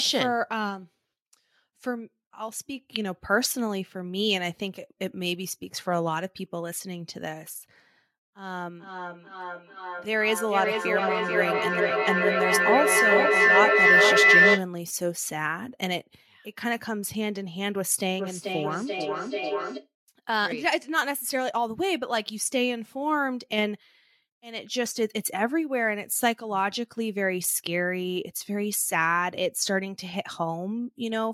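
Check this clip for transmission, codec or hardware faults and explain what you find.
Feedback echo between two devices, 8.78–14.71 s and 18.19–19.92 s: one device replays another's microphone, which recaptures it. Each word returns roughly every 400 ms, thinner and ringing, swelling to about 8 dB above the speech in the first stretch and staying about 3 dB below it in the second.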